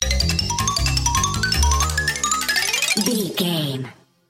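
At 1.84 s the sound jumps into a section at the wrong speed and stays there to the end, playing about 1.12 times too fast. Pitch climbs roughly two semitones with it, so everything turns brighter and hurried, likely from being played back against a mismatched clock.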